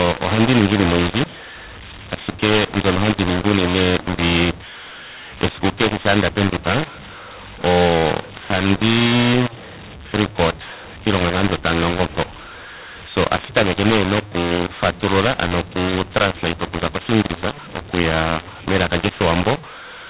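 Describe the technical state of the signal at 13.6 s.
A mu-law and A-law mix-up is present at 13.6 s and runs through the whole clip. The speech was coded with mu-law and is being decoded as A-law, so sample levels are scrambled and quiet samples are pushed well above silence. The speech sounds harsh and distorted, and its pauses fill with noise. The telephone band still stops at 4 kHz.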